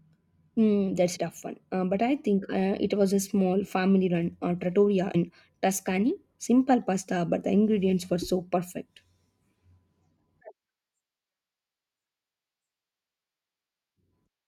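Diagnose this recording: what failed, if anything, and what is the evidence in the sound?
Compressed frames were skipped in the codec stage of this speech at 1.15 s, just before "tough one", at 5.14 s, right after "family run uh trattoria", and at 8.21 s, after "but the ingredients were". At each, the audio jumps ahead, about 70 ms at the first two and about 20 ms at the third. Those gaps fit whole frames of roughly 21 ms, about three frames at the first two and one at the third, that went missing or were discarded by the decoder.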